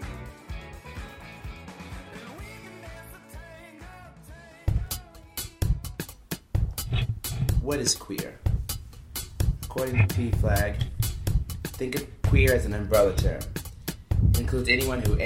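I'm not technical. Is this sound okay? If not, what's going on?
No. From 4.71 to 5.62 s there are seven quick, evenly spaced ticks: CD scratch ticks, where a disc scratch spoils data once per rotation.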